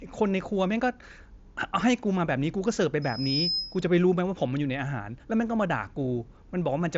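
At 3.02 s a loudspeaker feedback squeal begins in the speech and lasts until 3.87 s. A loudspeaker's output has found its way back into the microphone feeding it, and at 5.1 kHz the loop gain went above one, so that tone fed on itself. It swells from nothing over a little under half a second to roughly the level of the speech. That growth sets it apart from a steady interfering whistle, which would sit at a fixed level from the start. The tone falls within the headset band, whose content stops near 7.7 kHz.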